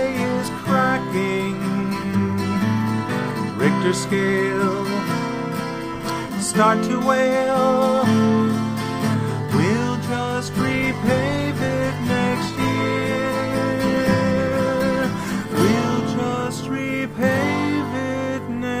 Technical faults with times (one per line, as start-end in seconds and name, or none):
10.49-18.51 call bitrate drop